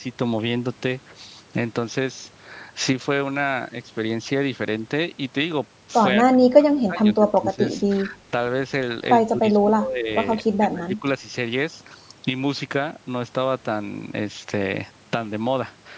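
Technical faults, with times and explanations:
6.3–7.63 s, 8.02–8.18 s, 9.28–10.1 s and 10.39–11.05 s, speech suppressed in double talk: the speech ducks or breaks up by up to about 25 dB, likely an echo canceller turning everything down while both sides talk. The waveform envelope sinks in chunks, and the spectrogram thins or blanks below the 8 kHz ceiling that the call's microphone processing sets.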